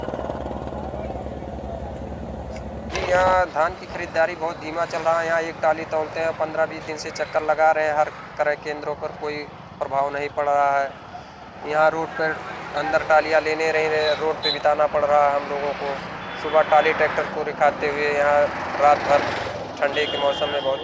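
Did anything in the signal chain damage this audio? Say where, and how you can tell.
No, nothing in the signal chain damaged this audio, and there is no point where any damage can be heard.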